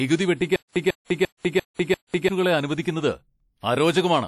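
From the start the speech carries plainly audible codec damage: a ringing, washy quality with hiss that breathes along with the voice, and nothing above 14.2 kHz. This is likely WMA compression, whose long transform blocks smear quantisation noise over tens of milliseconds, and the level of damage fits a low bitrate around 48 kbps. Unlike plain band-limiting, the noise itself rises and falls with the signal.

From 0.56 to 2.29 s there is a stutter with silent gaps. A 147 ms fragment plays, then about 198 ms of dead silence follows, and the pattern repeats five times at an even 345 ms period. The likely cause is a stalled stream or player replaying its last fragment on each retry before running dry, so the audio meant for that span is lost. The complete silence between identical bursts distinguishes it from a dropout or a simple skip.

At 1.05 to 1.10 s there is pre-echo: a 55 ms hiss runs ahead of a sharp attack, and the attack itself sounds softened. 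The transform codec spread noise sized for the loud onset across its whole block, including the quiet moment just before it. Ordinary codec hiss follows a sound, but this hiss comes before the attack, which sets it apart.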